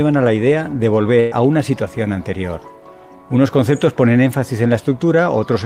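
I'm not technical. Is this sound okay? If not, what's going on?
No. From about 1.19 to 1.34 s there is a burst of packet loss: roughly 120 ms of audio never arrived in time, so the player stretched and faded the last sound to fill the hole, then jumped ahead with that stretch missing.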